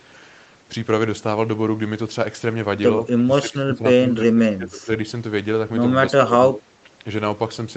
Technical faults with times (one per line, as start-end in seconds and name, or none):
3.15-4.90 speech suppressed in double talk
6.18-6.70 speech suppressed in double talk